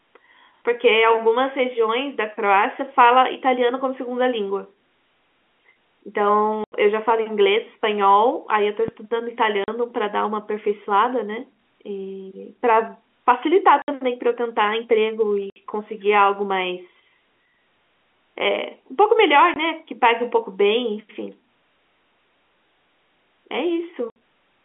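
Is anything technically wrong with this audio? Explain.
Yes, the speech is interrupted by dropouts and a single low thump.

Packet loss filled with silence occurs at 6.64 s (80 ms), 9.64 s (40 ms), 13.82 s (60 ms), 15.5 s (60 ms), 19.54 s (20 ms) and 24.1 s (60 ms). All lengths are multiples of 20 ms, which fits 20 ms packets being dropped and replaced by nothing. Each gap sounds like a hard chop. A waveform shows flat silent stretches with abrupt boundaries, and a spectrogram shows clean vertical blank bands.

A phantom power thump runs from 8.88 to 8.99 s. A supply switching on or off on the live input sends a voltage step through the coupling capacitors. It is heard as a deep bump decaying in about 24 ms, seen as a low-frequency swing in the waveform and a dark burst at the bottom of the spectrogram.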